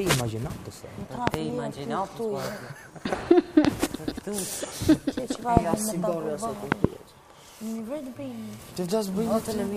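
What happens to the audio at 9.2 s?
Nothing goes wrong at 9.2 s; the audio plays through that moment intact.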